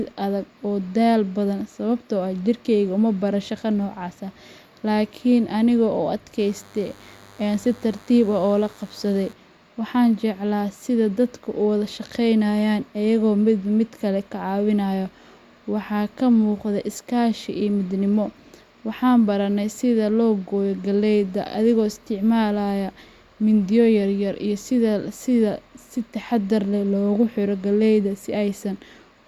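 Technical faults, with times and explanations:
6.39–9.33 s DECT cordless phone buzz: a thin, steady 100 Hz buzz with many harmonics, faint beneath the speech; a nearby DECT unit's 10 ms radio bursts are rectified into the audio.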